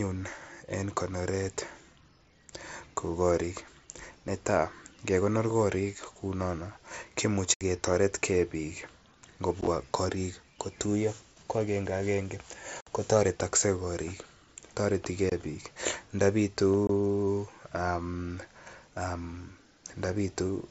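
Unconcealed Bluetooth headset packet loss punches holes in the speech at 7.54 s (67.5 ms, just before "ketoret ge bik"), 9.61 s (30 ms lost in short runs across 60 ms, before "korik kotuiyo ko agenge"), 12.81 s (60 ms, right after "kotuiyo ko agenge agenge"), 15.30 s and 16.87 s (22.5 ms each). Voice packets between headset and phone failed to arrive and silence or an idle pattern took their place, so each drop is an abrupt hole with hard edges. The scattered 9.61 s loss sounds chopped, heard through the light grain of the mSBC wideband link.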